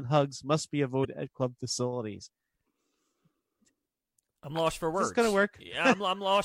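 A speech clip with one instance of damaged data in a compressed stream, from 1.01 to 1.05 s, between "hugs must be" and "at club facilities". Corrupted bytes there make the decoder misread frames and lose sync while it hunts for the next header, producing a brief disruption of about 46 ms.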